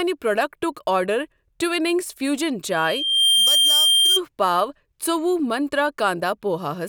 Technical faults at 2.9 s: loudspeaker feedback squeal

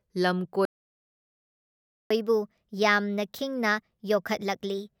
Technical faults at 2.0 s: playback stall

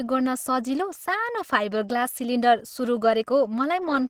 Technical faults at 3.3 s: Opus compression

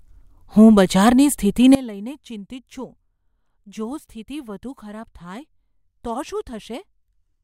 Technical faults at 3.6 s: sudden gain jump

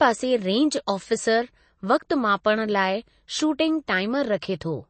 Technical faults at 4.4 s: MP3 compression; pre-echo

